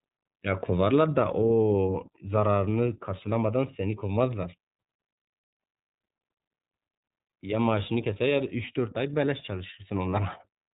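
iLBC codec damage runs through the whole speech clip. Each short block of sound is coded on its own, without drawing on the block before, and the coarse, blocky texture fits 30 ms frames at a low rate, around 13 kbps. Nothing above about 3.8 kHz survives, so sibilants and breath lose their edge and the sound turns muffled and narrowband. The coding damage is plainly audible as a rough, slightly synthetic quality.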